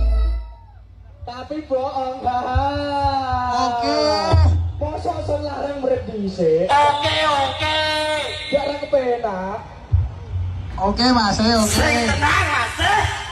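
Nothing here calls for attention, since no dropouts, glitches or other technical faults turn up anywhere in the audio.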